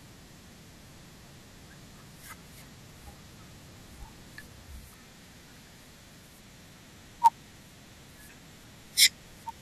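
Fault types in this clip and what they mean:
Block size mismatch (padded): Each block of speech ends in a short run of zero-filled silence. This causes a steady buzz near 99.6 Hz, and the speech runs slightly slow, at 0.996 times normal speed.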